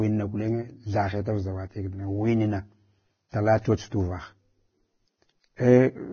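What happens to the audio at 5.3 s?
At 5.3 s the speech carries the same heavy Vorbis compression damage heard across the whole clip. The treble is hissy and grainy and consonant attacks are smeared. The likely cause is a low-quality Vorbis encode, pointing to a bitrate near 18 kbps, which shapes the sound with a smooth spectral floor and replaces fine high-frequency detail with coarsely quantised noise. On a spectrogram there is a hard ceiling at 6.6 kHz, with speckled, blotchy energy just below it.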